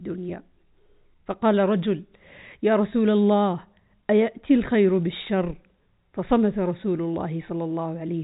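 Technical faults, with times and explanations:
No technical faults can be heard in this speech.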